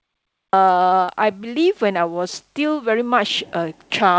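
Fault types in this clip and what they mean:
Cut-off start: The recording begins late, so the clip opens on digital silence and the speech enters abruptly at 0.53 s, already partway through a sound. It has no natural onset or fade-in; the signal simply switches on. A dropout would interrupt sound that was already playing, but here nothing came before, so the missing part is the start of the utterance itself.
Short concealed packet loss: Around 1.04 to 1.10 s, about 40 ms of the call never arrived in time, and the receiver filled roughly 36 ms of that gap by extending the preceding sound before blending back into the real signal. It comes across as a brief smear rather than a hole. A plain dropout would leave silence or a hard gap, while concealment papers over it, within a call path that carries nothing above 8 kHz.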